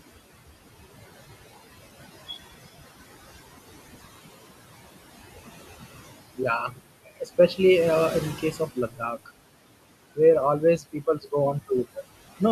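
Noise suppressor artifacts run through the whole of this speech recording. The suppressor pulls the room noise, which sits about 14 dB below the voice, down by about 18 dB in the gaps and lets it back up under the words. Speech cut by the noise suppressor appears at 6.68–6.8 s, 7.05–7.59 s just before "uh in the", 8.38–9.3 s right after "uh in the", and 10.6–11.33 s. In each span, quiet parts of the voice are mistaken for noise and dropped by about 12 to 17 dB, so short stretches sound swallowed or faint.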